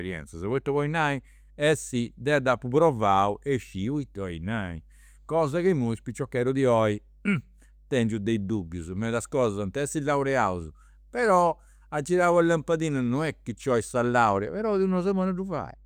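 Mains hum runs underneath the speech from start to finish: a steady 50 Hz tone with low harmonics, roughly 30 dB below the voice, typical of a ground loop or nearby transformer. A spectrogram shows unbroken horizontal lines at 50 Hz and its multiples.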